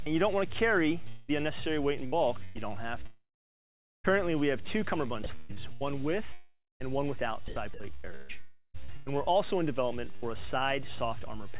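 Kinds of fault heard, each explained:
short concealed packet loss: Right at the start, about 0.04 to 0.09 s, roughly 20 ms of audio failed to arrive in time and the receiver patched it by extending the preceding sound before blending back into the real signal. It is heard as a very brief smear at the opening. On a spectrogram the last frequency pattern simply carries on for a sliver of time. In the waveform the cycles repeat briefly, then merge into the returning audio.
long network dropout: Three long holes occur, at 1.08 to 1.30 s, 3.06 to 4.06 s and 6.33 to 6.82 s, likely from stretches where nothing arrived over the network. In each, the receiver stretches the last sound into a fading buzz or hiss. The first gap is filled throughout, but about 780 ms of the second and 160 ms of the third end in silence. A spectrogram shows a frozen, smeared band, decaying into blank space in the second and third, where the waveform shrinks to a flat line before the audio returns.
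repeated packet loss (robotic sound): Between 2.06 and 2.61 s, packets went missing three times in quick succession. The longest gap was 110 ms, and about a third of that span is concealment rather than real signal. Each patch continues the previous sound, giving a choppy stutter with pieces missing. On a spectrogram, short repeated blocks of frozen harmonics or noise alternate with genuine detail. The waveform shows copied cycle patterns broken up by the returning segments.
sound chopped by the voice detector: In two stretches the sender appears to have repeatedly stopped transmitting and let comfort noise stand in. This is likely caused by its voice detector switching off. About 235 ms is replaced between 5.24 and 5.83 s, and about 908 ms between 7.48 and 10.24 s. Those parts drop to a smooth synthetic hiss. On a spectrogram they become featureless, evenly spread noise, band-limited to 4 kHz like the rest of the G.711 call audio, and the waveform shows a low, uniform fuzz.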